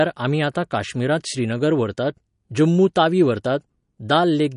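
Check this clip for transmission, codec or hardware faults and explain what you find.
One codec fault runs through the whole speech clip. MP3 compression, throughout: nothing is heard above 10.5 kHz, and the damage is plainly audible. This is likely a low-bitrate MP3 encode, around 40 kbps. Short of bits, the encoder cuts the treble and drops weak frequency lines that flicker between frames, giving a watery, swirly texture, dull sibilants and smeared attacks.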